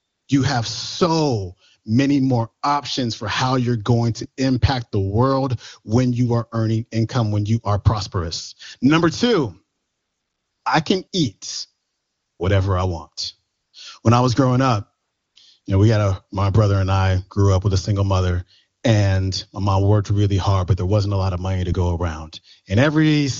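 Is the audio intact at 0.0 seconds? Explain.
No. From 0.0 to 0.27 s, AMR comfort noise replaces the real background: with no speech frames sent, the receiver synthesises a steady, smooth noise from a coarse level and spectrum description.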